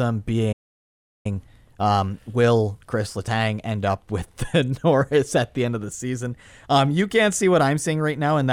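A speech clip with a playback stall from 0.52 to 1.26 s, where the audio drops to silence for about 0.72 s, likely because the player ran out of buffered data. Time-compressed catch-up follows from 1.26 to 4.26 s. The player trims and cross-fades small segments to clear the backlog, so delivery runs about 1.1 times fast at unchanged pitch.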